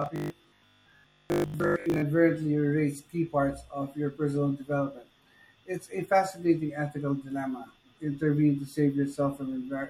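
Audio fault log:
0.02 to 2.02 s, robotic sound from repeated short buffers: new audio likely arrived too seldom, so a fragment about 20 ms long was replayed in place of most of the real signal, forcing a rigid, metallic 50 Hz buzz onto the speech until "erase key parts of".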